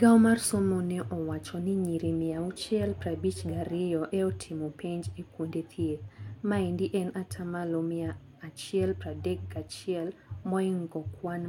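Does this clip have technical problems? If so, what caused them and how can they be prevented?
No, nothing in this speech recording stood out as a technical problem on listening, so there is nothing here that needs preventing.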